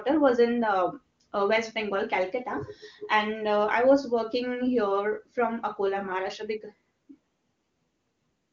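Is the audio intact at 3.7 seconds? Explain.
Yes, the audio is intact at 3.7 seconds, with no fault there, just the speech carried through the AMR wideband (HD Voice) codec at 23.85 kbit/s.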